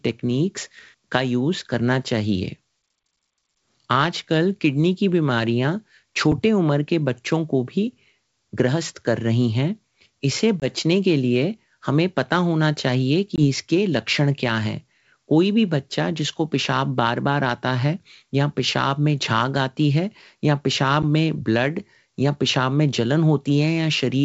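At 6.32 s the speech drops to a block of digital silence lasting about 5 ms, which fits a 256-sample output buffer that was not filled in time. The sound cuts out and straight back with no fade, so the short hole comes across mainly as a sharp tick.

At 10.60 s and again at 13.36 s there is packet loss on the ADPCM call. Each time, roughly one 20 ms packet is missing and replaced by silence, leaving a hard-edged gap. Because this path is G.722 wideband coding at 64 kbit/s, the decoder's adaptive predictor and step size lose step with the sender's during the gap. The speech then resumes slightly distorted, which clears within a few tens of milliseconds.

At 21.02 s a second block of digital silence appears, about 11 ms long, consistent with a 512-sample buffer. Though twice as long as the first, it is still heard as a tick or dip rather than as silence.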